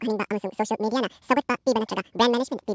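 Throughout, the speech runs twice as fast and an octave higher, a wrong sample rate consistent with 8 kHz audio played at 16 kHz. A spectrogram shows harmonics and formants spread to double spacing, and the waveform looks squeezed to half length.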